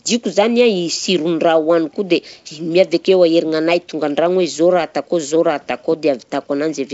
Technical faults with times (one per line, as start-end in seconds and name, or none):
none